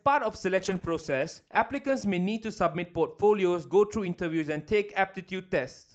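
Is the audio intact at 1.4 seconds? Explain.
No. At 1.4 s the speech sits inside a call bitrate drop from 0.56 to 2.97 s, where the Opus encoder falls from 64 to 11 kbps. The coarser coding makes it sound watery and muffled, with lost treble, yet continuous with no gaps or dropouts.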